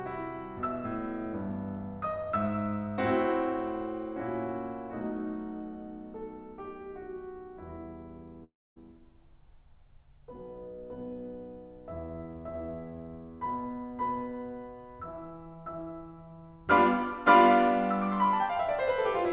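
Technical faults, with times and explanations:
8.44–8.78 s, long network dropout: the music smears into a fading buzz, then falls silent for 0.25 s. It resumes with 0.32 s lost, likely from missing packets.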